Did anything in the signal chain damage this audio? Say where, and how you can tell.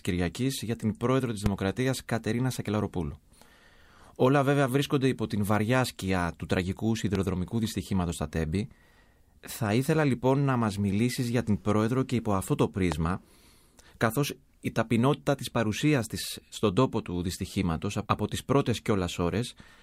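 Yes: loud pops at 1.46–1.48, 7.15–7.18 and 12.92–12.94 s, single spikes about 15 dB above the speech, which continues underneath. They show as broadband vertical stripes on a spectrogram, likely from voltage steps in the analogue wiring.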